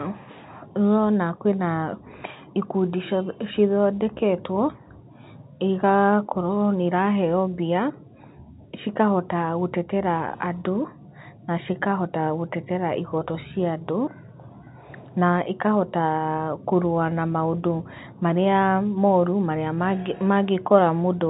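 Nothing stood out on listening to this speech, which comes through the narrow band of ordinary G.711 telephone coding with nothing above 3.8 kHz.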